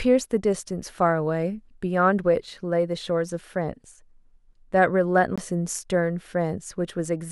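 At 5.36 to 5.38 s the speech hits a CD skip: a knock or a flaw made the laser jump onto a different turn of the disc's spiral, so there's a tick, a tiny mute of around 20 ms, and then playback carries on from a different spot.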